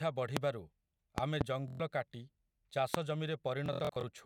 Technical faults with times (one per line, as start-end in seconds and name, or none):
0.37-0.39 loud pop
1.18-1.44 loud pop
1.68-1.80 Bluetooth stutter
2.94-2.97 loud pop
3.66-4.03 Bluetooth stutter